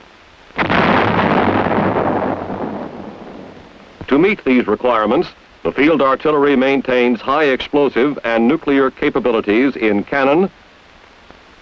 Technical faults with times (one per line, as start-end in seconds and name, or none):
none